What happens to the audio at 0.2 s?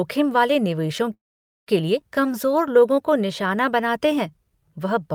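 Nothing goes wrong at 0.2 s; the speech there plays through intact, with no dropout, click or distortion.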